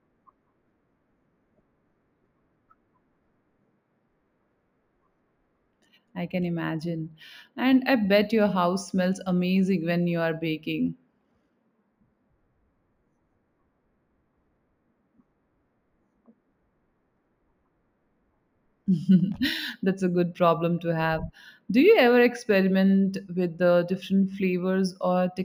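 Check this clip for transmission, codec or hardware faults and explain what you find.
One fault runs throughout the speech: imaging from linear upsampling. The straight-line interpolation, consistent with a 16 kHz source raised to 48 kHz, dulls the top and leaves mirror images between 8 and 16 kHz, roughly 35 dB down, heard as faint metallic shimmer on sibilants.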